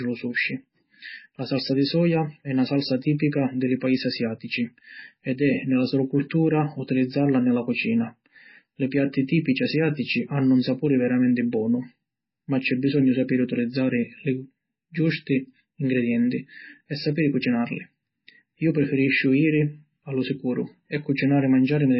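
Right through the speech there's heavy MP3 compression, likely a starved low-bitrate encode: nothing above 5.5 kHz, and a watery, swirly smear on sibilants and attacks.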